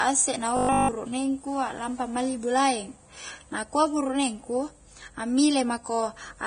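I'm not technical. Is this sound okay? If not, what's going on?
No. Throughout the clip, the speech was very likely squeezed hard by Vorbis compression. To save space, the encoder threw away the highest sounds and stored the remaining high sounds only roughly, so fine detail was replaced with noise. As a result, the voice sounds dull yet hissy and grainy, with a sandy texture on s-sounds and consonant onsets that feel smeared rather than crisp.

From 0.57 to 0.95 s there is robotic sound from repeated short buffers, most likely because fresh audio stopped arriving on time and the playback software kept replaying the same tiny slice to fill the gap. The replayed slice repeats 50 times a second, which fits a 20 ms chunk. Most of that stretch is these repeats, so the voice becomes a stiff, metallic buzz that only loosely follows the speech.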